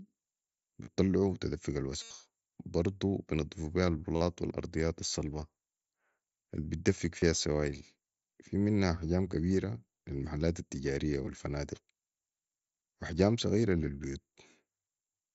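Speech with concealed Bluetooth headset packet loss at 0.84–0.88, 2.02–2.11, 4.16–4.21 (before "والارضيات الصلبه"), 7.20–7.22 (before "السوايل في منها احجام") and 11.25 s (after "كبير لي المحلات التجاريه"). Lost packets were filled by repeating recent waveform, which shows on a spectrogram as evenly repeated, buzzy harmonic bands at steady level.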